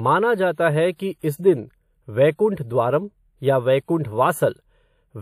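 Throughout the speech, channel delay (comb filtering) is present. One channel lags the other by about a tenth of a millisecond, consistent with a few samples. The mono sum cancels at evenly spaced frequencies from roughly 5 kHz upward, leaving a hollow, dulled top end.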